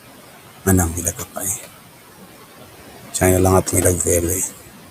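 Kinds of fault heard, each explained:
Noise suppressor artifacts, throughout: the suppressor pulls down every band it judges to be steady noise, by about 16 dB, frame by frame. The room noise, about 13 dB below the speech, sinks in the pauses and rises again under speech.
Speech cut by the noise suppressor, 1.05 to 1.43 s: just after "gaina amui", the suppressor mistakes part of the speech for noise and turns it down with the background, by up to about 12 dB over roughly 150 ms, so those sounds come across swallowed and faint.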